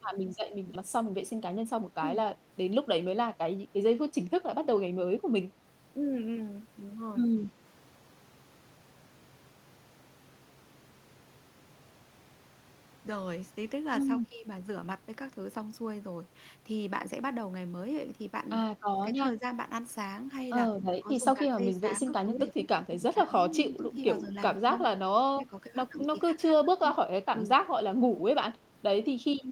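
Right near the start, at 0.75 to 0.77 s, there's a skip ahead. Something like 0.4 s of speech just vanishes and playback jumps straight on with no gap filled, so the two sides of the cut butt together almost seamlessly.

Straight after, from 0.97 to 2.36 s, you get a jitter buffer speed-up. The receiver was sitting on too much queued audio and trimmed out short pitch-period chunks, roughly a tenth of a second in total, so it runs at 107% speed, sounding a bit hurried but with the same pitch.

Later the talker keeps dipping, at 19.03 to 19.45 s, 21.03 to 24.64 s, 25.37 to 25.55 s and 26.46 to 26.84 s, mostly by about 10 dB but about 20 dB in the last one. That's likely speech suppressed in double talk, with the echo canceller ducking the talker while the far side talks.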